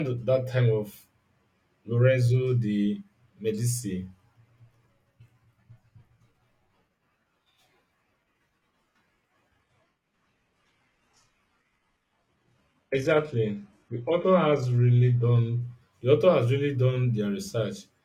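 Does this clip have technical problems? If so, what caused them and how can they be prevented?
Yes. From 9.61 to 15.61 s the speech drops to an adaptive stream at a lower bitrate. The slowed connection forced a sudden switch with no gap. Nothing remains above 12.3 kHz, and codec artefacts rise. Full quality returns before "the author has really". The sound fits a change from 96 kbit/s AAC-LC to 16 kbit/s HE-AAC. A steadier connection or a larger playback buffer would prevent it.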